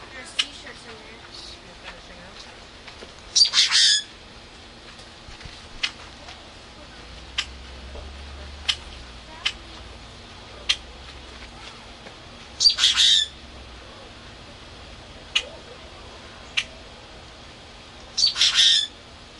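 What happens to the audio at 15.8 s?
Nothing goes wrong at 15.8 s; the sound plays through that moment intact, with no dropout, click or distortion.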